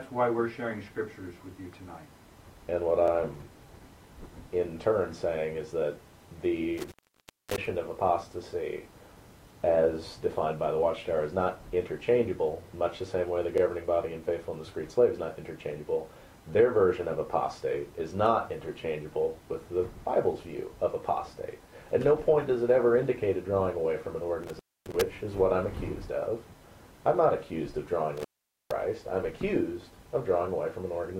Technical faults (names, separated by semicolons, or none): intermittent contact